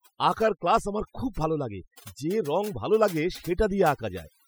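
Throughout the speech, overdone noise removal is audible: an over-aggressive reduction stage pulls individual frequency bands sharply down or out wherever they sit near its noise estimate. Quiet speech detail goes with them, leaving near-silent gaps sprinkled with twinkling artefacts.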